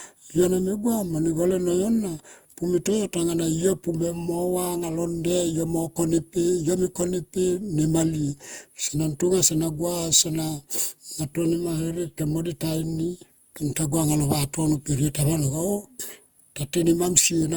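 Throughout the speech, the sound is swirly, smeared and hollow, with blurred attacks, beyond what a single encode would leave. This is generation loss, likely from around five lossy re-encodes, each requantising on a shifted frame grid, consistent with repeated Opus passes near 64 kbit/s.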